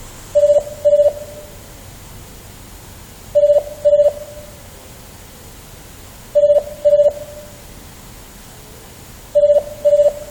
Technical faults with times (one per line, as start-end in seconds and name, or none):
none